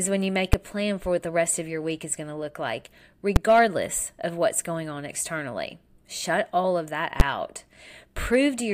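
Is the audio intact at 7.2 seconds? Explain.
No. At 7.2 s, just after "all of that", a calculation in the processing chain produced invalid numbers at full scale: infinite or undefined values were clamped to the largest positive or negative sample, so the output jumped to maximum level for one processing block. The event lasts about 11 ms, which fits a 512-sample block. Because the block is so short, the start and end pops merge into a single loud bang rather than two separate clicks.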